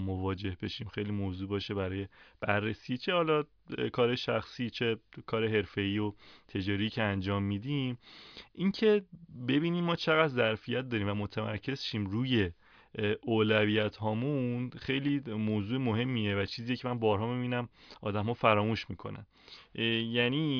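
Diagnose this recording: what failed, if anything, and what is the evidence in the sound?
Nothing in the speech points to a failure at any stage of the chain, from capture through to playback.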